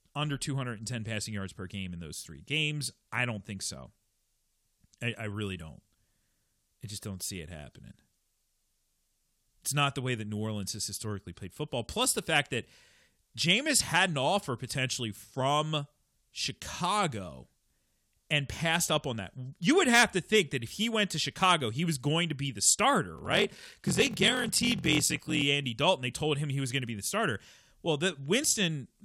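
Speech, and from 23.14 to 25.43 s there's a block size mismatch (padded): short writes get zero-filled, so a buzz at about 43.1 Hz appears, fitting a 1024-sample read block, and the speech drags to about 0.86 speed with its timbre unchanged.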